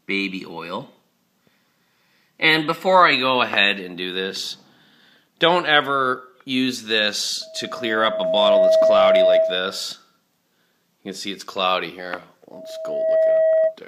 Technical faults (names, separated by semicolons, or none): loudspeaker feedback squeal